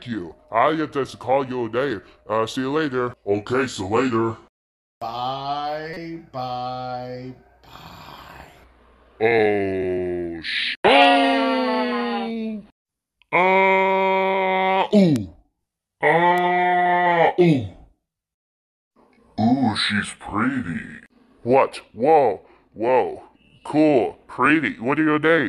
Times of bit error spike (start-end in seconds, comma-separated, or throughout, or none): 15.16, 16.38